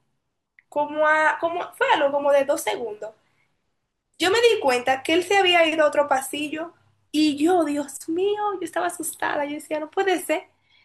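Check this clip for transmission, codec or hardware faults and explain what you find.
No transmission, codec or hardware faults.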